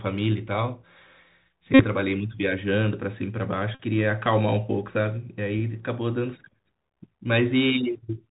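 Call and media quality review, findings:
Bluetooth CVSD headset codec, throughout: speech band-limited, nothing above 4 kHz, with plainly audible granular hiss and scratchy s sounds. Spectrogram shows a hard ceiling at 4 kHz with broadband grain beneath. The 1-bit up/down delta modulator's adaptive step can't track loud high content, so slope overload distorts it.

Bluetooth headset packet repeated, 1.74 to 1.85 s and 3.75 to 3.81 s: steady buzz near 267 Hz replacing the speech, then recovery when good packets return. Radio link dropped voice packets and the chip re-decoded the last packet's bits. Each 3.75 ms repeat produces the buzz. Waveform shows a short block repeating exactly; spectrogram shows harmonics spaced at 267 Hz. Losses of roughly 50 ms each point to 14 and 13 consecutive packets.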